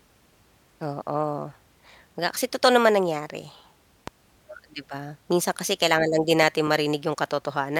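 A sharp loud pop cuts through the speech at 4.08 to 4.10 s, between "kasi totoo naman nangyari" and "o di ba minsan", then a double pop at 6.43 to 6.69 s after "kasi kailangan lang din", each about 10 dB above the speech. A voltage spike from a plug, switch or static discharge likely caused these.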